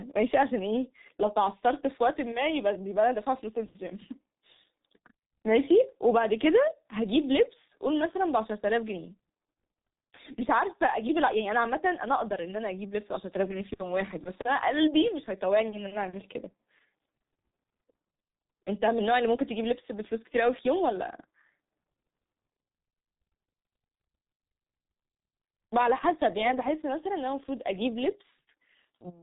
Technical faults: G.723.1 codec

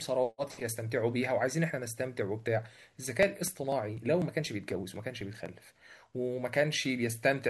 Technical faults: periodic USB or driver dropouts

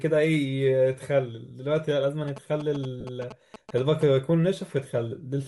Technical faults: Bluetooth LC3 compression; GSM signalling bursts; lost LE Audio frames

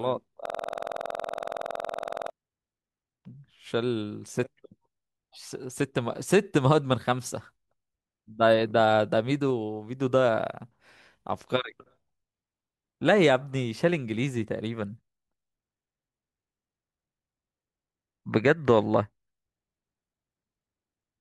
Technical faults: system hang loop

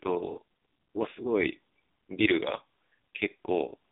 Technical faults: AMR narrowband mobile codec

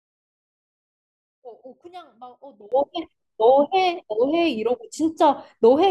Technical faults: one channel inverted

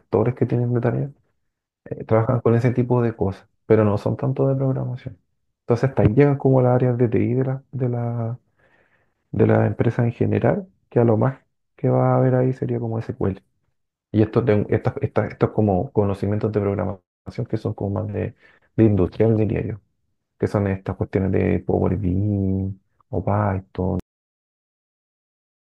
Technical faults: cut-off end

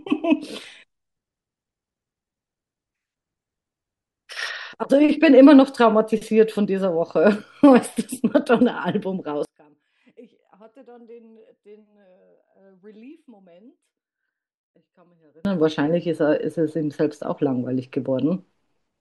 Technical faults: one channel inverted

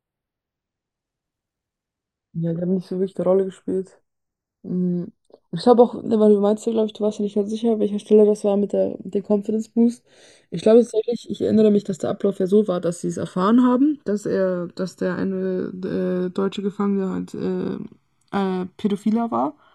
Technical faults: channels drifting apart

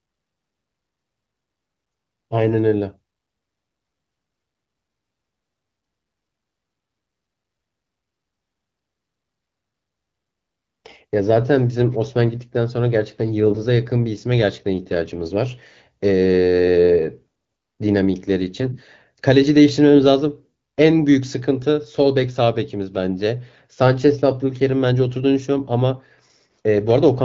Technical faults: AMR bit errors

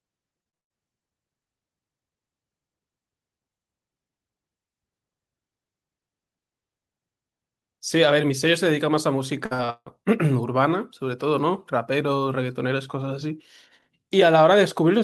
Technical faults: short concealed packet loss; burst of packet loss; repeated packet loss (robotic sound)

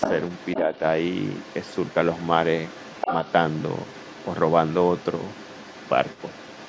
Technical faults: other side's voice leaking through; speech suppressed in double talk

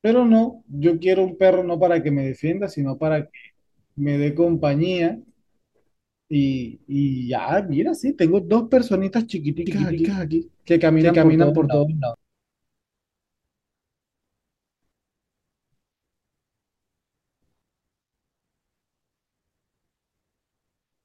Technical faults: doubled audio track

